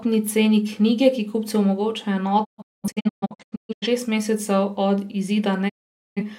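At 2.43 s the speech breaks up in a digital broadcast dropout. The receiver lost the signal or rejected corrupt frames and muted, each time fading out over about 20 ms. Between 2.43 and 3.87 s there are several short holes totalling about 0.94 s, the longest 0.21 s, which points to around twenty lost frames. At 5.68 s a second dropout mutes the speech until 6.22 s, removing about 0.47 s. The speech sent during both gaps is gone.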